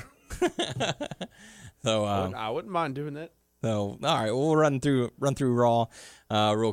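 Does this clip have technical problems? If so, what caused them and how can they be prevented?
No, no technical faults heard.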